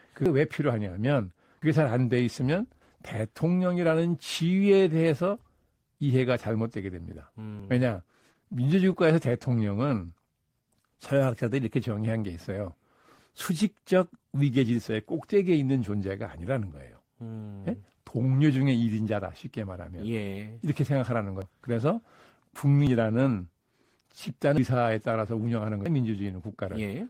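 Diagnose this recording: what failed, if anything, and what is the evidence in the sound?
Eight abrupt forward jumps in the speech occur at 0.26, 1.62, 2.82, 7.60, 21.42, 22.87, 24.58 and 25.86 s. The pattern points to the driver or buffer stage, most likely a dropped buffer (overrun): the application fell behind and the hardware overwrote unread audio. Four jumps skip roughly a tenth of a second, those at 7.60, 24.58 and 25.86 s about 0.15 s, and close to a third of a second at 21.42 s. There is no silence at any of them, which rules out a dropout or muted gap.

Between 7.12 and 8.55 s the speech picks up a scatter of brief ticks and smears, about ten of them, each only around 10 ms. These are scattered short gaps: packets lost or late on the network, with the receiver covering each hole by stretching the preceding sound. Only a small share of that stretch, around a twentieth, is concealed. 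Each repair is tiny and leaves no skip, unlike the overrun jumps, one of which lands inside this span at 7.60 s.

From 8.58 to 11.47 s the speech runs slightly slow, at 96% speed, with 132 ms added in total. This is a jitter buffer slow-down at the network receiver. Running short of reserve, it repeated single pitch periods and bits of pauses to rebuild its depth, drawing sounds out. The pitch holds steady, which separates this from a clock or sample-rate mismatch, where speed and pitch would drop together.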